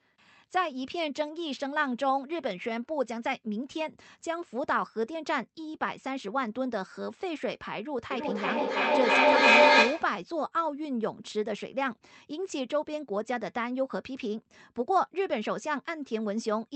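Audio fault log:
8.11–10.24 s, feedback echo between two devices: a second device replays the sound into this microphone roughly every third of a second, with repeats building to about 10 dB above the speech.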